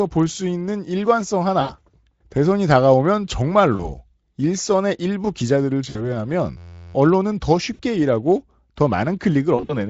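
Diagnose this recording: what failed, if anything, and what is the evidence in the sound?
The network stage failed, with VoIP packet loss concealed by the speech codec five times: 1.61 to 1.74 s (about 80 ms missing), 3.75 to 3.89 s (40 ms), 5.89 to 6.23 s (60 ms), 7.73 to 7.81 s (60 ms), and 9.55 to 9.76 s (100 ms scattered over 140 ms, longest run 40 ms). The Speex decoder fills each gap by extrapolating the last pitch and filter at falling gain. The result is a buzzy or tinted smear that decays. On a spectrogram this shows as harmonics frozen flat and fading. Weak, blurred speech follows briefly as the decoder state recovers.

The driver or buffer stage also failed, with a system hang loop from 6.57 to 6.94 s. The machine stalled while the output hardware kept replaying one 11.61 ms fragment, which fits a 512-sample buffer. It repeats 32 times, giving a steady buzz at 86.1 Hz, and around 0.4 s of real audio is lost. 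On a waveform it appears as an identical short cycle tiled exactly. On a spectrogram it appears as rigid horizontal lines spaced 86 Hz apart.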